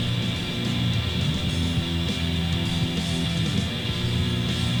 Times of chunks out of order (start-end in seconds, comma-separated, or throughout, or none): none